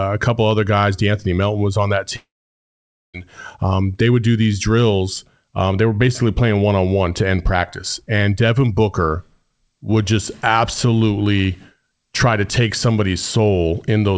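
At 2.16 s, after "was on that", a brief fading buzz or hiss gives way to silence until 3.16 s. A long network dropout likely lost about one second. Speech returns with "um they would do", and nothing above 8 kHz comes through the G.722 call path.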